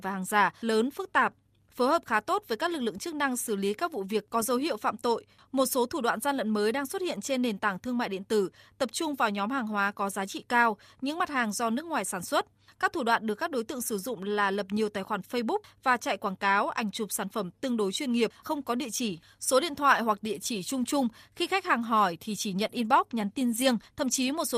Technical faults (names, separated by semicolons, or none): short concealed packet loss; lost packet rebuilt from error correction